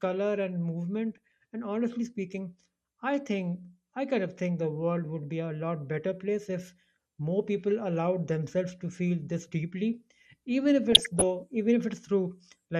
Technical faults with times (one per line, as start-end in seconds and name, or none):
0.00-12.79 MP2 compression
1.16-1.18 DAB burbling
10.92-11.23 DAB burbling